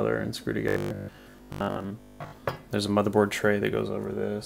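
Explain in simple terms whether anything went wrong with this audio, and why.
From 0.68 s to 2.44 s the sound turns into a rigid, metallic buzz at 50 Hz: robotic sound from repeated short buffers. The likely cause is that new audio arrived too slowly, so the playback filled the gaps by replaying the last short slice over and over while the real audio was skipped. A 50 Hz repeat rate fits slices about 20 ms long, and most of that stretch is repeated material rather than fresh sound.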